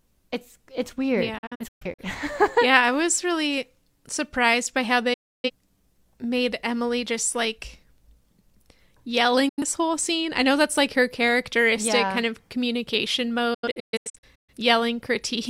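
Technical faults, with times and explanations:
1.38–2.03 s, 5.13–5.50 s, 9.49–9.62 s and 13.54–14.53 s, digital broadcast dropout: after "it's it's weird" and "yeah kind of communication" the speech breaks into short holes, none longer than 128 ms. Before "whole scene I know" it briefly vanishes. Each gap fades out in about 8 ms. The receiver muted whenever frames failed, losing that speech.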